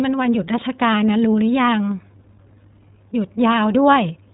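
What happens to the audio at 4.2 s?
At 4.2 s the speech is still passing through the iLBC codec, which codes each 20 ms frame independently and removes everything above 3.8 kHz, so the speech sounds muffled, rough and plainly synthetic.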